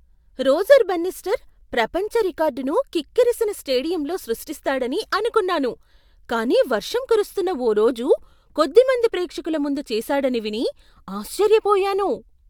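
Listening closely to the speech recording, nothing stood out as a technical problem at any point.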